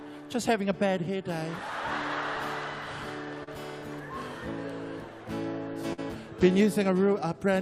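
Packets carrying the audio were lost twice in transmission. From 3.43 to 3.49 s a short concealed packet loss occurs: about 40 ms never reached the decoder in time, so the receiver spent 34 ms extending the preceding sound before blending back into the real signal, heard as a brief smear or wobble. From 5.93 to 6.10 s a burst of packet loss follows, where consecutive packets went missing. The receiver carried the last sound forward for about 49 ms, turning it down as it went, then dropped a further 9 ms before resuming, so playback jumps ahead past the missing material.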